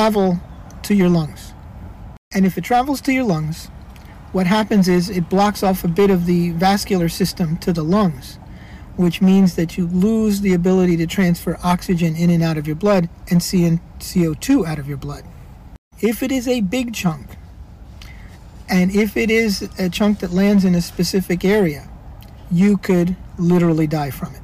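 Hard clipping runs through the whole clip. Something in the chain was driven about 8 dB past what it could pass, so the loudest peaks get sliced flat. That's only a small share of the samples, a few percent, but those squared-off tops throw harmonics way up the spectrum. You hear it as a gritty crackle riding every loud moment.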